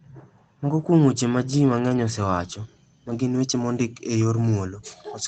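Speech carried over a WebRTC call path with Opus, band-limited to about 8 kHz and consistent with a 24 kbps stream, shows two spots of lost packet rebuilt from error correction. At 1.89–1.91 s, just before "osewacho ma", a 20 ms stretch turns briefly rougher and noisier. At 3.09–3.19 s, right after "osewacho ma", a longer 60 ms run, which fits three lost packets, carries the same grainy degradation. There is no gap in either spot, because the decoder played the low-bitrate copies carried in the following packets.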